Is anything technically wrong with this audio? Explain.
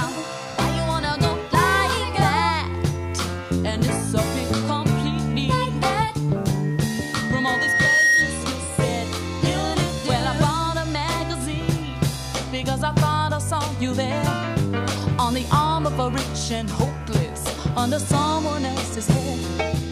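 Yes. From 6.63 s to 8.44 s a single piercing tone near 1.9 kHz rises out of the audio, swelling over about a second and a half until it sits roughly 5 dB above everything else, then stops. This is loudspeaker feedback squeal. The microphone was hearing its own loudspeaker, and around 1.9 kHz the round trip through the system amplified more than it lost, so that frequency kept feeding itself and growing.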